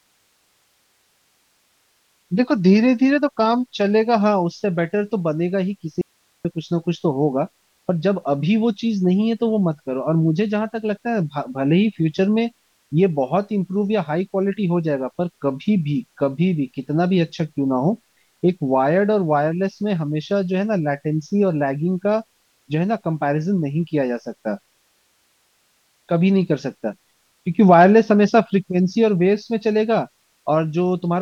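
At 6.01 s the speech drops out abruptly for about 0.43 s, until 6.45 s: an audio dropout to a faint residue. Only low hiss, roughly 45 dB below the speech, fills the gap, which likely means the signal was lost while the downstream path stayed live.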